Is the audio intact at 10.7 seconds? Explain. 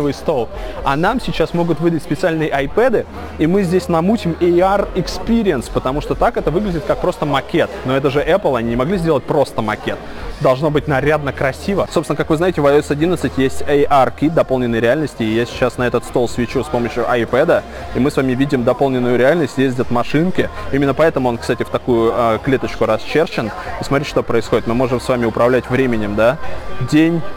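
No. At 10.7 seconds the audio carries crude rate conversion, present across the whole clip. The sample rate was changed by keeping the nearest existing sample instead of filtering, which fits a 48 kHz to 44.1 kHz conversion that periodically drops samples. The resulting timing errors form a repeating pattern, and that pattern adds inharmonic tones around 30 dB below the signal. They are heard as a gritty fizz that rides on loud and high-pitched sound.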